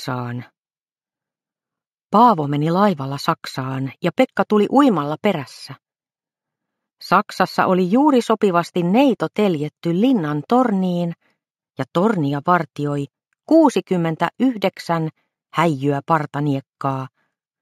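Throughout the audio, imaging from linear upsampling dulls the top of the original band and leaves a faint metallic shimmer on sibilant, bright sounds. A spectrogram shows a mirrored copy of the content between 8 and 16 kHz, roughly 35 dB down, consistent with straight-line interpolation from 16 kHz up to 48 kHz.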